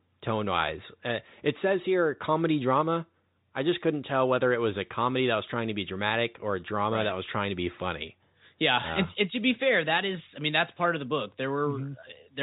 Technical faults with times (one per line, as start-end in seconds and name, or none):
none